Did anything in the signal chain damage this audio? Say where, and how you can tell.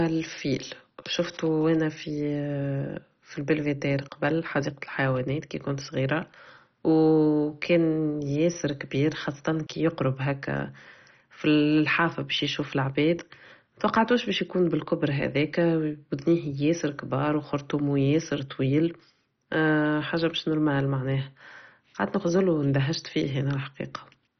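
Yes, at the codec stage, and the damage runs through the whole speech clip. It sounds dull and gurgling, with a granular roughness, which points to heavy MP2 compression at a very low rate, likely around 32 kbps. On a spectrogram nothing appears above about 6.1 kHz, and just below that ceiling the upper sub-bands flicker on and off in blocky patches. Starved of bits, the Layer II encoder shut off its upper bands and coarsely quantised the rest.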